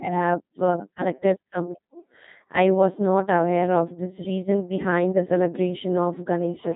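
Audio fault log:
Throughout, Codec 2 vocoder: speech was coded at what sounds like about 2.4 kbit/s and rebuilt from sine waves, leaving it robotic, buzzy, heavily damaged, with nothing above 3.8 kHz.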